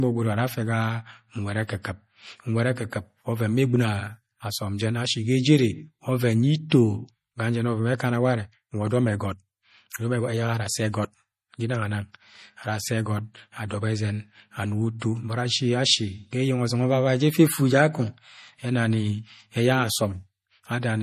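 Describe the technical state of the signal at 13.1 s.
At 13.1 s the speech carries damage from what is likely MP3 compression at a starved bitrate, present across the whole clip rather than at this moment alone; the degree of damage fits something near 40 kbps. With too few bits, the encoder cuts the treble, leaving nothing above 15.1 kHz, and drops quieter frequency lines that flicker in and out between frames. The result is a plainly audible watery, swirling texture, with metallic chirps on s sounds and softened attacks.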